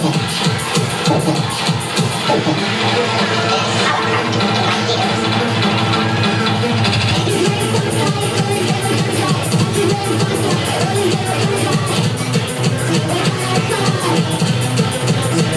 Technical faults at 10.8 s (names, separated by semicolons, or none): wrong sample rate